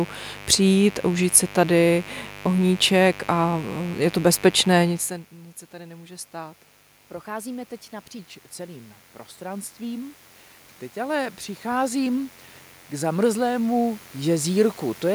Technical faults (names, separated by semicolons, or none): mains buzz; section at the wrong speed; automatic gain rising